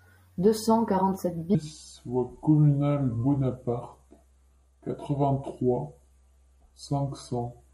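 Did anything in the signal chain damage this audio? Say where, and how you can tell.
Yes. From 1.55 s onward, a section at the wrong speed: speech slows to 0.716x and sinks about five semitones. Likely a playback clock mismatch.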